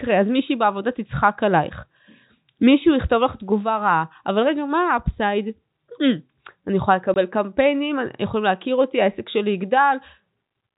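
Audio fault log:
7.14–7.16 s, packet loss filled with silence: two consecutive packets, likely 10 ms each, failed to arrive, and the receiver played silence in their place, so the speech stops dead for 20 ms, with abrupt edges, against the plain narrowband G.711 telephone sound.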